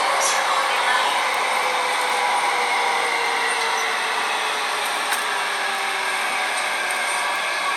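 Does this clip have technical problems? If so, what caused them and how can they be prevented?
Yes. There are five bit error spikes, at 1.34, 2.10, 3.26, 5.75 and 7.36 s. Each is a single sharp tick that has nothing to do with the surrounding sound. Their peaks reach about -5, -11, -17, -17 and -11 dBFS. The one at 5.75 s spans two samples, and the rest span one. A flipped bit in stored or transmitted data pushes a sample value far off by a power of two. It then snaps straight back, leaving a broadband click. Using error-checked storage and links, such as ECC memory and checksummed transfers, prevents this.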